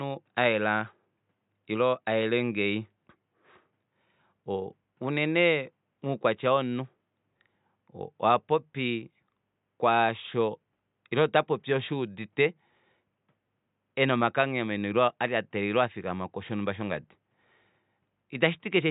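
No technical faults are audible.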